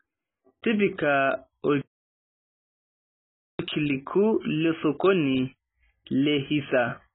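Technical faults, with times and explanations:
Throughout, AAC compression: nothing is heard above about 3.8 kHz, so the speech sounds dull and muffled, with a watery, warbling smear on vowels and a fizzy, grainy texture where sibilants should be crisp. The likely cause is an AAC-LC encoder starved of bits, which fits a very low rate around 16 kbps. Unlike a plain low-pass filter, the damage also flickers from frame to frame as bands drop out and return.
1.81 to 3.59 s, playback stall: the speech stops mid-flow and the output falls fully silent for about 1.78 s before resuming. That points to the player likely running dry of data or being blocked.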